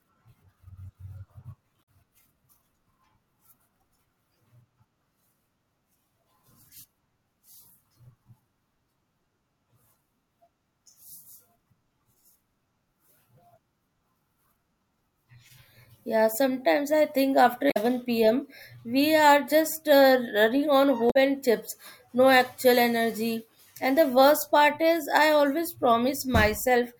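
At 1.79 s the speech gets a short glitch lasting about 90 ms, with the same damaged data in a compressed stream hitting again at 17.67 s, right after "sometimes I think after" and before "pm we are just", and at 21.07 s, between "running on" and "and chips no actual". Each time a stretch of the compressed data is corrupted, so the decoder garbles those frames, loses sync and hunts for the next good header, leaving a brief blip.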